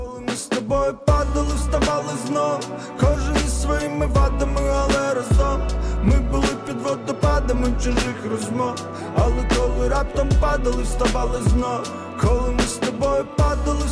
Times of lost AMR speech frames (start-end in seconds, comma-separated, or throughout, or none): none